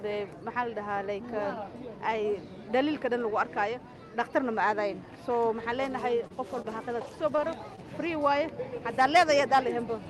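Between 6.23 and 7.79 s, a handful of packets were lost or arrived late, about five scattered short gaps totalling 80 ms. The receiver bridged each by extending the preceding sound across roughly 200 ms, leaving brief ticks, smears and hiccups, the longest about 30 ms.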